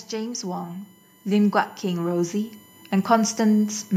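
A thin, steady whine sits under the speech from start to finish, fixed in pitch and about 35 dB below the speech, with a 1 kHz fundamental and its harmonics, most prominent up at 13 kHz. This is USB whine: the USB bus pulls current in regular 1 ms frames, and that rhythmic load leaks into the audio through the shared power or ground, stamping a tone at the frame rate and its multiples onto the signal.

From 0.1 s to 3.91 s the whole recording slowly swells, speech and background rising together by about 10 dB over nearly four seconds rather than in a sudden jump. This is automatic gain rising: the automatic gain control judged the incoming level too low and kept raising its gain bit by bit, so everything it passes, including room sound, gets louder along with the voice.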